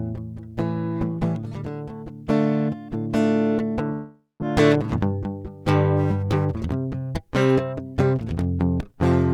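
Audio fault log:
3.92–4.43 s long network dropout: music decays into a fading buzz or hiss, then 160 ms of flat waveform, a blank spectrogram gap; likely half a second lost in transit.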